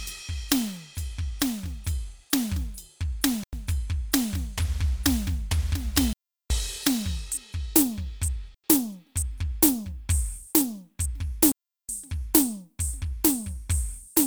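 The output buffer likely went unfilled four times, leaving a block of digital silence in the music each time: 3.44–3.53 s and 8.55–8.64 s (93 ms each, fitting a 4096-sample buffer), and 6.13–6.50 s and 11.52–11.89 s (372 ms each, fitting 16384 samples). Each is heard as a hole where the sound cuts out and back without any fade.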